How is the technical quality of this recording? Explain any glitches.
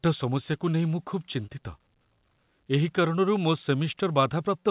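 There's one real glitch in this speech recording, which comes through a narrowband call path that leaves nothing above 4 kHz.

At 1.46 to 1.50 s there's a short concealed packet loss. About 20 ms of audio didn't arrive in time, so the receiver extended the preceding sound to cover the hole and then blended back in. You hear it as a quick smear or wobble.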